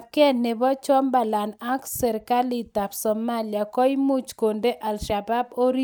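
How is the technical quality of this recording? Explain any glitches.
The technical quality of this recording is sound, with no glitches to explain.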